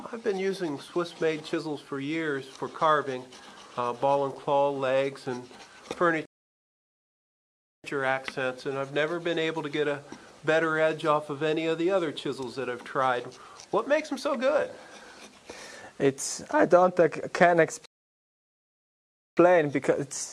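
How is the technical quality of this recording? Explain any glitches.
Two rebuffering stalls interrupt the recording. At 6.26 s the sound drops to silence until 7.84 s, and at 17.86 s it drops out again until 19.37 s. Each time it resumes exactly where it stopped, with nothing missing. The player ran out of downloaded audio and waited for more to arrive, adding about 1.58 s and 1.52 s of silence.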